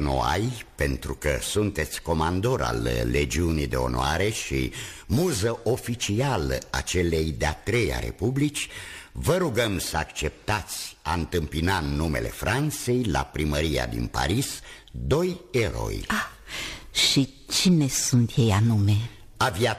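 Throughout the clip there is crude rate conversion. The grainy, inharmonic fizz fits a 48 kHz to 44.1 kHz change done by nearest-sample picking, with samples skipped or reused and no filtering. The resulting spurious tones sit around 25 dB below the signal and rise with loud, bright passages.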